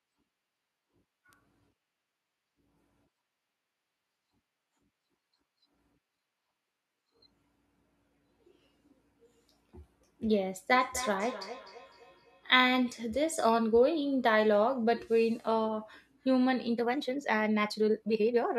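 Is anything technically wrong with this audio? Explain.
Yes, there are three faults.

At 1.33 s there is a bit error spike. A single sample jumps sharply and snaps back, as a flipped bit would cause. It is heard as one bright tick across the whole spectrum, unrelated to the speech around it.

From 10.69 to 12.73 s there is feedback echo between two devices. Another device's loudspeaker is feeding this microphone again. Each word returns roughly every 300 ms, thinner and more ringing, at most about 14 dB below the speech.

From 16.71 s to the end there is a time-stretched section. The pace jumps to about 1.59 times faster while the pitch stays the same. That is likely caused by software dropping short pieces to shorten the audio, which makes the speech sound rushed.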